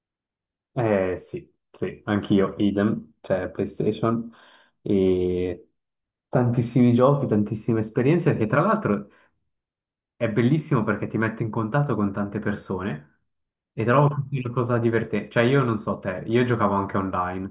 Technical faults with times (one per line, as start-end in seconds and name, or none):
none